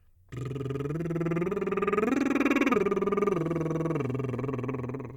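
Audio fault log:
Nothing stood out on listening to this music.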